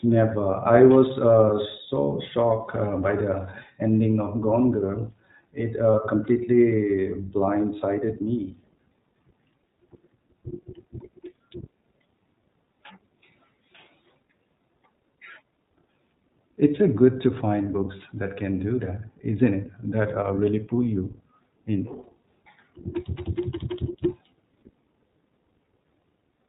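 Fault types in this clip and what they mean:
iLBC codec, throughout the clip: The speech is band-limited to narrowband, with nothing above 4 kHz, and it has a plainly audible rough, slightly synthetic edge. iLBC codes the excitation of each frame on its own, without relying on the previous frame, and the character here fits its 15.2 kbps mode with 20 ms frames. The missing upper band comes from the narrowband coding and the grainy texture from the low-rate coding.
Lost iLBC frames, 5.92 to 5.95 s: For about 20 ms the speech is replaced by a brief held, slightly buzzy or breathy sound. That gap is consistent with a single lost packet. The decoder covers the hole by repeating the last pitch cycle mixed with noise. Because each iLBC frame decodes independently, the speech recovers cleanly right after the dropout, with no smearing into the following frame.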